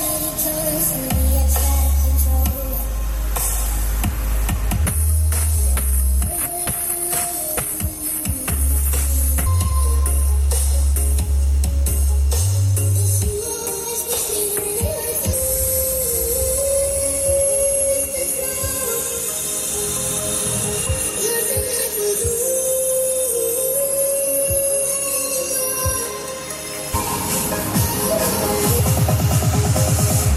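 From start to end the audio carries video or display buzz, a screen or video cable leaking its picture signal into the audio path. The buzz repeats at 75 Hz, the display's field rate, with a gritty hash above it, sitting roughly 25 dB below the wanted signal. On a spectrogram it shows as steady horizontal lines at 75 Hz and its harmonics plus broadband speckle. In quiet gaps the waveform shows a jagged pattern repeating every 13.3 ms.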